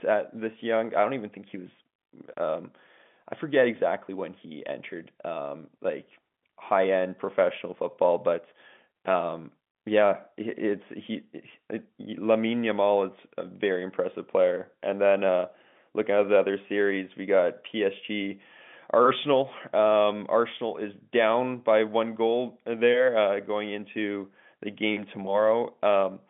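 The clip is speech carried over an ordinary telephone line, and nothing is technically wrong with it.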